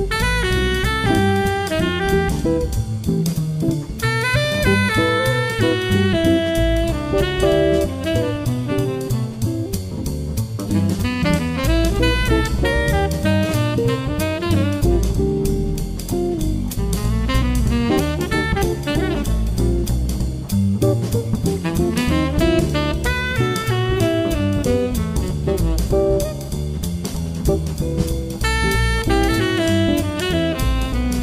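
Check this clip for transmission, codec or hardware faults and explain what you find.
There's one hardware fault, a USB whine, from about 21.03 s to 23.96 s. A thin, steady tone at 1 kHz sits under the sound for those three seconds, roughly 40 dB below the signal, so it's faint. It comes from the USB bus pulling current in 1 ms frames, which puts a 1 kHz ripple on the power or ground. That ripple leaks into the audio path as a fixed-pitch whine.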